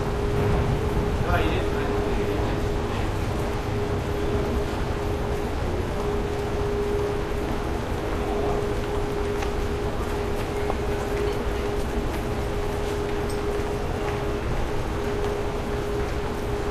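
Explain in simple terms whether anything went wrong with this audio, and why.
Nothing went wrong with this recording; no technical faults can be heard in it. The sounds come through steadily, with no dropouts, breaks or glitches at any point.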